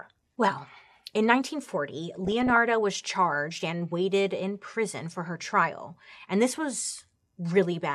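Speech, with DAB burbling from 2.25 to 2.57 s, just before "was charged and waited". For that third of a second the sound burbles. Weak reception let bit errors slip past error correction. Corrupted samples put short blips of noise into single sub-bands.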